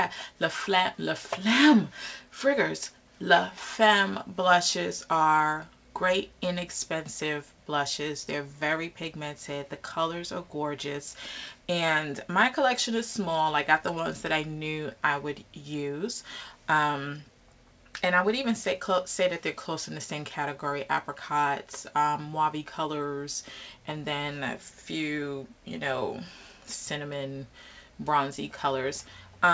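Nothing here stands out as a fault; the sound came over what seems to be a G.722 call path and simply has nothing above 8 kHz, which fits that codec's usual band limit.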